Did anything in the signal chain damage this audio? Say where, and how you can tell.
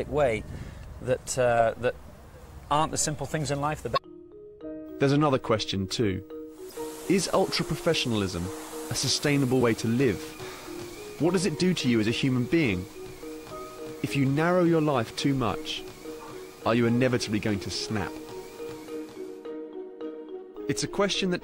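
Yes, damaged data in the compressed stream: short glitches at 3.93–3.98 s and 6.68–6.72 s, where the decoder lost sync and hunted for the next frame header.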